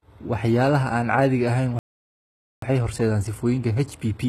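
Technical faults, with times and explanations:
throughout: HE-AAC compression, likely at a low bitrate around 16 kbps. Rebuilt treble sounds gritty and lispy; the spectrogram shows smeared, copied-looking bands above the crossover.
1.79–2.62 s: playback stall, likely from the player running dry. The sound cuts out mid-flow for about 0.83 s, a flat silent gap in the waveform, then resumes.
2.62–4.29 s: time-compressed catch-up. The player drops and cross-fades small slices to clear its backlog, so the sound runs about 1.15 times fast at normal pitch with tightened spacing.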